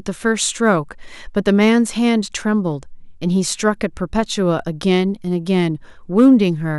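Brief crackle breaks out on the loudest peaks of this speech at 1.48 to 1.70 s and again at 6.18 to 6.28 s. It is a rough edge on those moments, not a sustained fuzz. Both are hard clipping. The signal overran what a stage in the chain could pass by about 2 dB, so the tops of the waveform were sliced flat. Those squared-off peaks generate high harmonics that the ear picks up as crackle.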